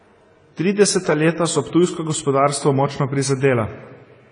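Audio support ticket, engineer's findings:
AAC compression, throughout: speech dull and smeared, nothing above 10 kHz, warbling texture on sibilants. Likely an AAC-LC encoder starved of bits, which fits a bitrate of about 24 kbps.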